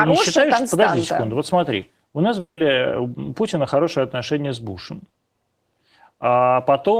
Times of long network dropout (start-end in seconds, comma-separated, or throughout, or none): 2.39-2.59